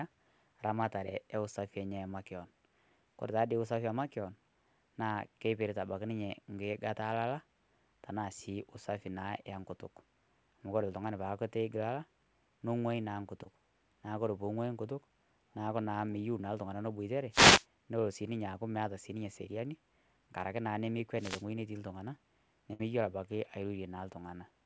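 At 13.44 to 13.47 s, just after "neng'oii naa", a short concealed packet loss appears. About 20 ms of the call arrived too late, and the receiver patched the hole with roughly 13 ms of sound extrapolated from what came before before blending back in. It is heard as a tiny smear or wobble. Unlike a loss burst, it is too short for any held buzz or fade to develop, and the flow barely breaks.

Two wireless microphone noise hits follow, at 17.30 to 17.66 s after "meiyeu naa ltung'ana neibuatare" and at 21.16 to 21.45 s after "ng'araki naa". In each, the analogue FM radio link faded as reflections cancelled, letting receiver noise swell into a swish of static over the speech for about a third of a second. What marks these as radio rather than network faults is that the speech underneath keeps running. Nothing is repeated or dropped. Noise is simply laid on top and clears as the signal recovers.

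At 22.73 to 22.81 s comes a burst of packet loss. About 60 ms of audio never arrived in time. The receiver held the last sound for about 61 ms, decaying as it went, then resumed with that stretch missing. It differs from the short loss at 13.44 s by its length: the concealment is long enough to be heard as a held buzz or fading hiss, followed by a jump where speech is lost. The whole clip passes through a call path with nothing above 8 kHz, which fits G.722 at 64 kbps.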